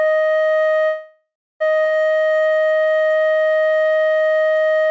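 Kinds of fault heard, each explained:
call audio freeze: The music halts and its last sound hangs on as a fading buzz, silent for about 280 ms, then resumes; likely packets were delayed and the jitter buffer ran dry.
skip ahead: The music jumps forward almost seamlessly, with about half a second missing, because a stretch was dropped while later audio was already queued.
jitter buffer slow-down: The music plays at 87% speed at unchanged pitch, stretched by 376 ms, as the jitter buffer repeats tiny segments to rebuild its reserve.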